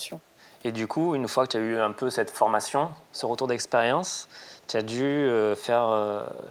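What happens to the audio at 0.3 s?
Nothing goes wrong at 0.3 s; the audio there is intact, with no dropout, click or distortion.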